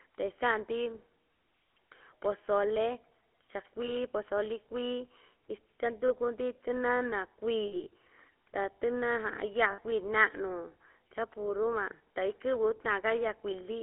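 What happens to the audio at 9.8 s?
Lost GSM frames from 9.72 to 9.80 s: about 60 ms, which fits three 20 ms frames, was filled by repeating the last good frame. The result is a brief, rough metallic ring. Underneath, the GSM full-rate codec models the vocal tract with pulse excitation, giving a buzzy, gravelly roughness and nothing above 3.4 kHz.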